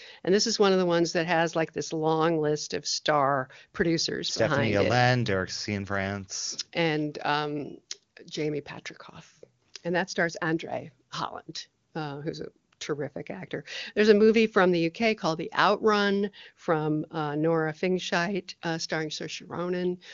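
Nothing stood out on listening to this recording.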